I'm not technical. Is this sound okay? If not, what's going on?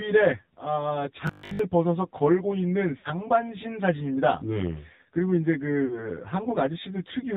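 No, it isn't okay. There are four problems.

Throughout, it sounds hollow and phasey. This is channel delay (comb filtering). One side of the recording runs about 10 ms behind the other. When the two are mixed together, some tones cancel out at evenly spaced points, starting very low in the bass.

The whole clip also has the thin, boxy sound of an old phone call. That comes from the AMR narrowband mobile codec. It throws away everything above 4 kHz. It rebuilds speech from a simple model, so the voice sounds plainly buzzy and artificial.

From 1.27 to 1.59 s, the speech turns into a rigid, metallic buzz around 50 Hz. This is robotic sound from repeated short buffers. Audio likely arrived too slowly, so tiny slices were replayed over and over. The buzz fits a 20 ms slice.

At 2.98 to 3.08 s and again at 5.86 to 6.11 s, there are lost AMR speech frames. Bits of speech were damaged by radio errors. 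The phone filled about 60 ms and then 40 ms by stretching the last good sound. This gives a brief smear or dip, then a rough return.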